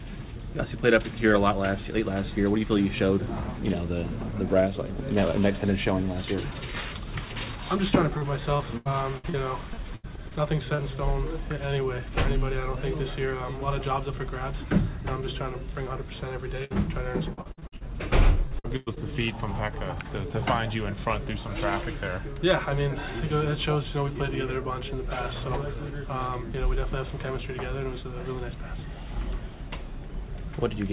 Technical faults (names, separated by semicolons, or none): repeated packet loss (robotic sound); short concealed packet loss; burst of packet loss